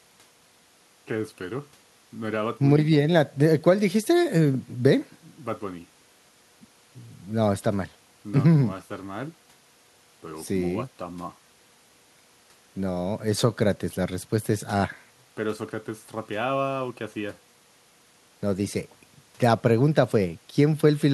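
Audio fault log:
No faults can be heard anywhere in this speech.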